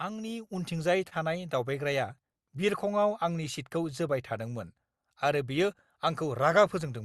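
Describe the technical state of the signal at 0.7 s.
The speech and its background noise sit about 8 dB louder from 0.47 s onward, a sudden gain jump, likely a digital gain step applied without a ramp.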